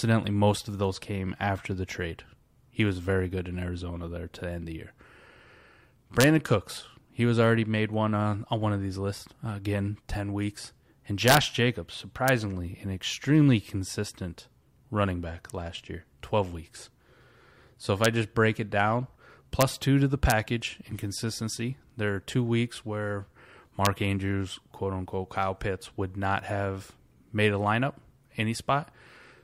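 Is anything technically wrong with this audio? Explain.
Yes, the speech has integer overflow, with sharp cracks at 6.21 to 6.24 s, 11.28 to 11.37 s, 12.28 s, 18.05 s just before "just break it down", 19.61 s, 20.30 s between "two to the" and "in consistency", and 23.85 s after "are two weeks where". The loudest peaks only pushed about 0 to 1 dB past the integer ceiling, but the samples weren't limited. They wrapped around to the opposite sign, so each one flips across the full range and snaps out as a violent crack, far harsher than clipping.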